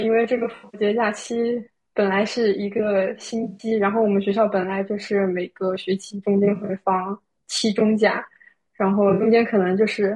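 From the start the speech has a rough, grainy texture, with noise filling the gaps between harmonics and a thin, synthetic-sounding top end. That's likely low-delay AAC compression, AAC-ELD, at a low rate that fits around 32 kbps. At 0.37 to 0.81 s, 3.43 to 3.67 s, 6.45 to 6.73 s and 9.09 to 9.27 s there's AAC frame loss with concealment. The decoder patched short scattered gaps, none longer than about a tenth of a second, by reusing the last good spectrum, so each spot turns briefly smeared, noisy or phasey.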